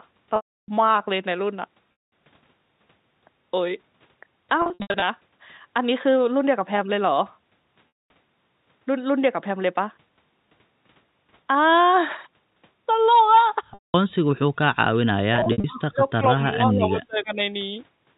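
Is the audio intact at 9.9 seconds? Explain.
Yes, the speech at 9.9 seconds is intact, with no dropout, click or other fault at that moment.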